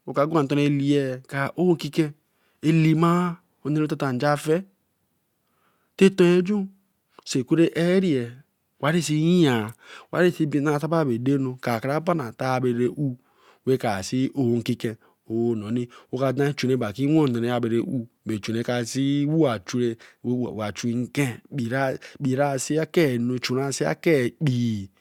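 No technical faults are audible anywhere in this recording.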